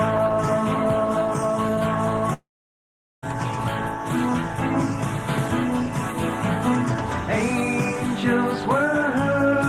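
The audio breaks off from 2.33 s to 3.24 s. About 0.9 s is lost. The last sound carries on briefly as a fading buzz or hiss, then near silence holds for about 0.79 s. Playback resumes without the lost part. This is likely a long network dropout.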